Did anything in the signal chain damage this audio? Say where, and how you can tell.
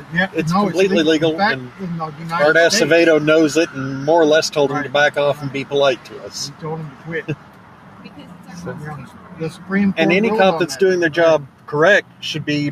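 Yes. A noise suppressor applied to music or sounds sits in the call processing, treating steady material as noise, so the level pumps by around 10 dB throughout.

Sound cut by the noise suppressor shows up at 1.6–2.31, 5.34–8.57, 9.03–9.7, 11.47–11.68 and 12.02–12.22 s. Held parts sink by about 7 to 8 dB while attacks get through.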